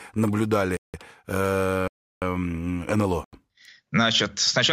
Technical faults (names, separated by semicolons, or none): block of digital silence